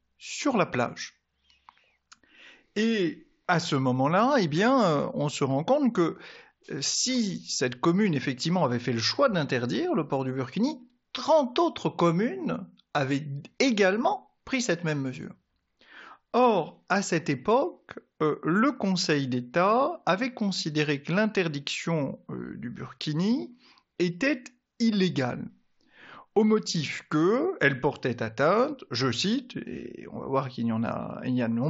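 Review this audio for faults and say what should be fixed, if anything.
Nothing to fix: the speech runs through the Bluetooth mSBC headset path as that link is meant to, and no faults turn up anywhere in the audio.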